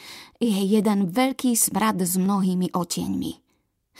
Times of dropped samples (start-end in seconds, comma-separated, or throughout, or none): 2.26